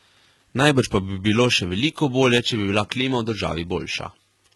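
The whole speech clip has a smeared, synthetic top end, with nothing above 11.8 kHz and heavy damage throughout. That points to HE-AAC compression at a very low rate, likely around 16 kbps, where the treble is rebuilt from lower bands, so s sounds come out gritty and lispy.

Then, from 2.35 to 2.46 s, right after "bi bilo še veliko" and before "če bi bila klima", there's a short burst of loose connector crackle: a bad contact briefly making and breaking, chopping the signal into a scratchy, irregular rattle.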